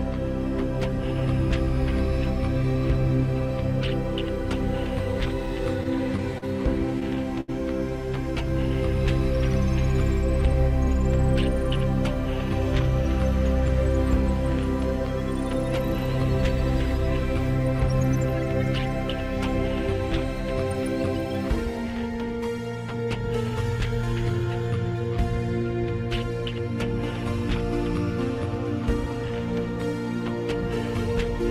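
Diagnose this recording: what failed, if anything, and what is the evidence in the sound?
Network stage: repeated stalls (stutter) from 5.83 to 7.50 s, seven short hitches up to 75 ms, where the jitter buffer ran dry and stretched the last sound instead of dropping any.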